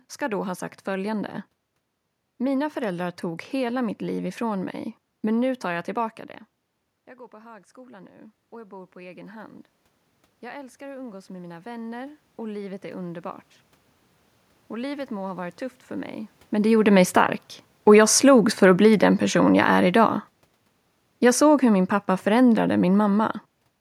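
From 7.3 s to 13.52 s the speech and the room noise swell together, climbing about 13 dB. This is automatic gain rising: after the talker moves back around 6 s and the input drops about 19 dB, the gain control slowly raises its gain to compensate.

Just after "varit tufft för mig", as the talker moves again around 16.5 s, the speech sinks with its background by about 9 dB between 16.55 s and 23.31 s. That is automatic gain falling, the control gradually pulling back.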